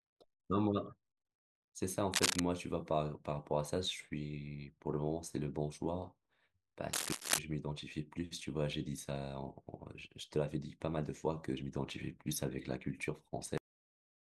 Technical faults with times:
2.13-2.40 cable scratch noise
6.93-7.39 cable scratch noise
13.58-14.39 cut-off end

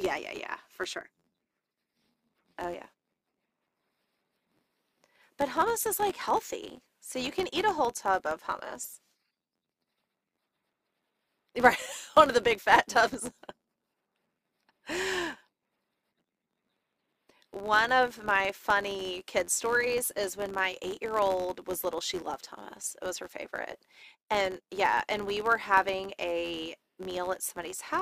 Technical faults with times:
0.00-28.01 filter restarted on every block

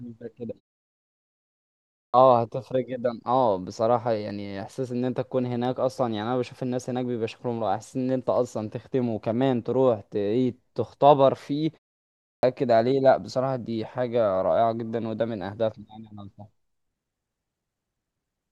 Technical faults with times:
2.03-2.14 clipped start after a pause
12.32-12.43 clipped start after a pause

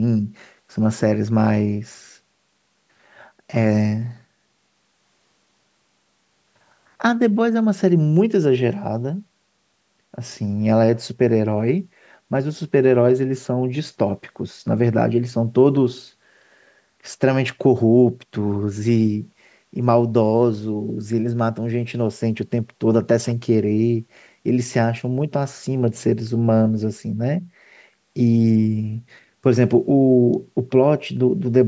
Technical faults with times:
none

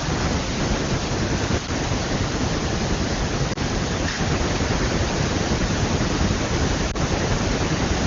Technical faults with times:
3.53-3.58 lost AMR speech frames
6.91-6.96 lost AMR speech frames

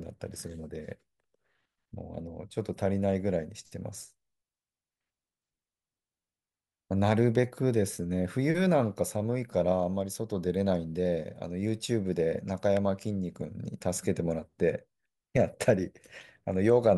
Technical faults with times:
7.35 electrical switching spike
12.77 electrical switching spike

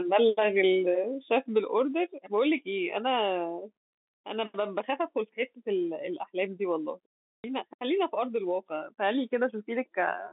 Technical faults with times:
7.15-7.44 packet loss with last packet repeated

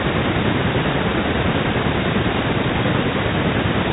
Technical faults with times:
none

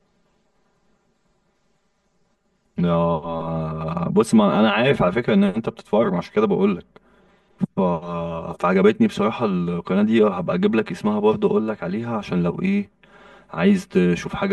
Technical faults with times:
0.00-14.53 channel delay (comb filtering)

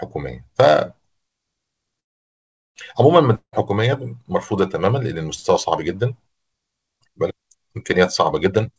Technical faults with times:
2.00-2.78 call audio freeze
3.35-3.56 long network dropout
8.46-8.78 jitter buffer speed-up

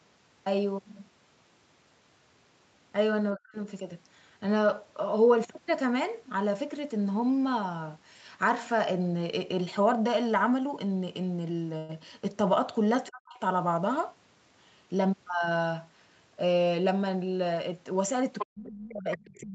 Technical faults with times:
3.35-3.57 speech suppressed in double talk
11.77-11.91 call audio freeze
13.08-13.40 speech suppressed in double talk
14.76-15.75 jitter buffer speed-up
18.38-18.46 other side's voice leaking through
18.43-19.55 speech suppressed in double talk
19.12-19.41 other side's voice leaking through

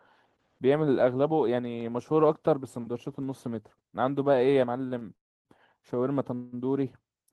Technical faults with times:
4.88-5.03 short stall from a late packet
5.15-5.47 call audio freeze
6.34-6.54 call audio freeze

